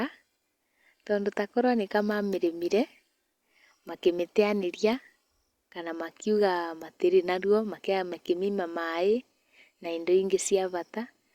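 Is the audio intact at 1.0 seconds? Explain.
Yes, the speech at 1.0 seconds plays through cleanly, with no dropout, click, distortion or other fault at that point.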